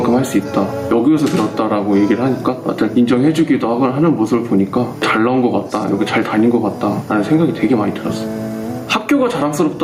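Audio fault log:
Throughout, gain pumping: the gain keeps getting pulled down on loud sounds, swinging by something like 15 dB, so loud and soft parts end up closer in level and everything feels squashed together. Most likely the input gain was set far too high and a fast limiter kept clamping it down.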